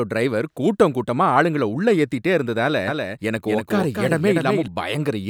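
A doubled audio track runs from 2.88 s to 4.68 s, starting right after "ஆளுங்கள உள்ளே ஏத்திட்டே இருந்ததால". A second, full-band copy of the speech trails the original by roughly 300 ms, a few decibels quieter, with no decay or room colour. It switches on and off abruptly, so the speech briefly sounds stuttered and overlapped. The likely cause is the same signal being captured again through a slower path.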